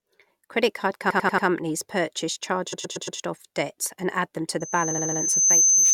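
From 1.09 to 1.47 s the audio stutters, one 93 ms fragment replaying four extra times. These are repeated frames: a block of compressed frames was decoded again, adding 0.37 s. The same stutter returns from 2.72 to 3.18 s, just before "debts and add them", with a 116 ms block repeated four more times for 0.46 s extra. Right after "and add them to", at 4.60 s, a pure 6.2 kHz tone swells over roughly 0.7 s into a piercing whistle about 10 dB above the speech and holds to the end. This is loudspeaker feedback squeal, where the microphone hears its own loudspeaker and the loop's gain exceeds one at that frequency. Within it, from 4.90 to 5.18 s, a 70 ms block of repeated frames plays four extra times, adding 0.28 s.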